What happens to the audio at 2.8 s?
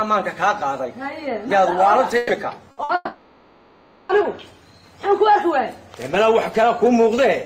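Two quick bursts of packet loss hit there, at 2.71 to 2.80 s and 2.83 to 2.92 s. Each time the receiver stretches the last sound into a fading 60 ms fill, then jumps ahead past the missing audio.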